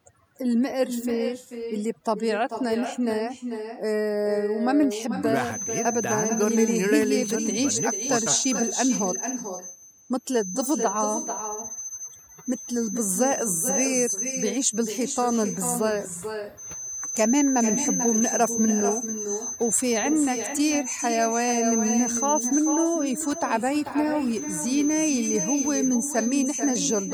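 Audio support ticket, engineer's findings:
Overdone noise removal, entire clip: background gated to near silence with twinkling specks. Denoiser set too aggressive, zeroing bands near its noise estimate. Unlike codec smearing, the artefacts follow the noise floor.

Echo with no canceller, entire clip: every phrase shadowed roughly 0.4 s later by a thinner copy about 8 dB down. Far-end speakerphone pickup, no AEC. Unlike room reverb, it is a distinct delayed repeat, not a decaying tail.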